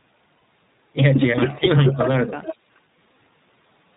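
Speech coded with the iLBC codec runs the full length, and its damage is plainly audible: the band stops dead at 4 kHz, which shows on a spectrogram as a hard, empty ceiling above that line, and the voice has a rough, slightly synthetic grain throughout, consistent with 15.2 kbit/s operation using 20 ms frames. Lost iLBC frames appear twice, from 0.36 to 0.42 s and from 2.12 to 2.15 s. The first gap lasts 60 ms, which fits three consecutive 20 ms frames going missing, and the second lasts 20 ms, a single frame. In each gap the decoder repeats the last pitch cycle blended with noise, so the sound turns into a short held, buzzy vowel. On a spectrogram the harmonic stripes go flat and smeared, with a noisy haze between them, before normal speech snaps back almost at once. From 1.60 to 1.76 s the level dips by roughly 5 dB in short bites totalling about 70 ms. This is likely speech suppressed in double talk, where an echo canceller turns the talker down while the far side is also speaking. 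The waveform envelope shows small notches rather than full dropouts. Echo leak shows up at 1.93 to 1.97 s and again at 2.43 to 2.55 s. In both places a copy of the voice trails the original by 430 ms. The first copy is very faint, around 30 dB down, but the second is much stronger, only about 10 dB below the speech. The likely cause is a loudspeaker on the far end whose echo canceller let part of the signal back through. On a spectrogram the echo looks like a weaker duplicate of earlier formant patterns, shifted 430 ms later in time.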